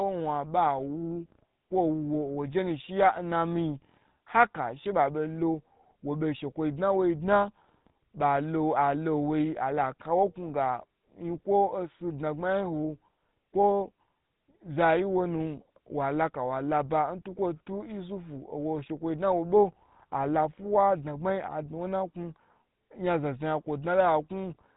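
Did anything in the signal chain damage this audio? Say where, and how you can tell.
Yes. The codec stage is at fault: throughout, this speech carries the buzzy, gravelly roughness of the GSM full-rate codec. Nothing passes above 3.8 kHz, which fits its 13 kbps pulse-excited coding.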